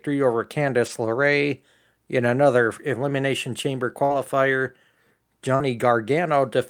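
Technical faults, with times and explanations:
0.85–0.87 s, 4.10–4.20 s and 5.59–5.61 s: lost packets rebuilt from error correction. Lost audio was replaced by a low-bitrate copy carried in the next packet, so nothing drops out. The speech just turns briefly rougher and noisier, for 20 ms at 0.85 s and 5.59 s and 60 ms at 4.10 s, which fits three 20 ms frames.
4.05–4.12 s and 5.56–5.61 s: short concealed packet loss. About 40 ms never arrived each time, and the receiver extrapolated the preceding sound before blending back. Unlike the coarse but real rebuilt frames, this is invented continuation, heard as a smear or wobble where brief sounds can vanish.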